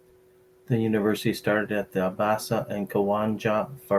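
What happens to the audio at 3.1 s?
Nothing goes wrong at 3.1 s: the speech continues intact through that moment with no audible fault.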